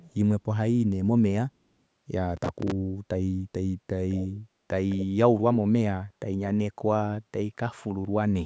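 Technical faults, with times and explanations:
0.02–0.14 s, 4.10–4.39 s and 4.89–5.06 s, echo leak: A delayed copy of the sound trails the original by about 225 ms in the first span and about 215 ms in the later two. It is barely audible at first, about 40 dB down, then much stronger, about 20 dB and then about 15 dB below the main level. The likely cause is an echo canceller on a loudspeaker end passing residue back. On a spectrogram, the harmonic bands reappear as fainter, slightly blurred duplicates shifted right by roughly a fifth of a second.
2.37–2.72 s, processor overload crackle: A gritty tearing sits on the sound for about a third of a second and then stops. A busy processor missed a long run of deadlines, around fifteen. Each missed block was filled with a stale piece of earlier audio spliced in with hard edges. Each block was roughly 5 ms long, a small buffer. The waveform shows repeated short segments with abrupt jumps at their joins, and the spectrogram shows thin vertical broadband streaks.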